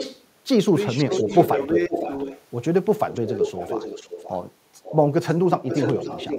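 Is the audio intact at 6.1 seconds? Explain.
No. From 5.64 to 6.38 s an echo leak adds a delayed copy of the speech, about 529 ms late and only a few dB quieter. The likely cause is a loudspeaker's echo canceller failing to remove it. Unlike room reverberation, it is a distinct repeat rather than a smooth tail.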